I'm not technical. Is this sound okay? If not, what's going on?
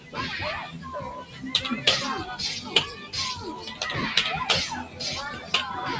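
No, not quite. A noise suppressor built for speech was left on, and it treats steady parts of the sound as noise, so levels keep pumping down and back up. You can hear the sound cut by the noise suppressor in six short dips: at 0.0 to 0.16 s, 0.67 to 0.87 s, 1.21 to 1.43 s, 2.94 to 3.13 s, 4.85 to 5.0 s, and 5.36 to 5.53 s.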